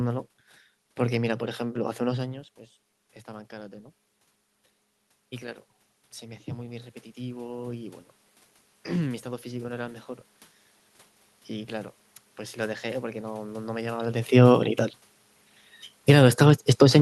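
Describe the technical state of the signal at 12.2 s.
At 12.2 s the signal is intact, with no dropout, distortion or other system fault, only the background noise of the room carried along with the speech.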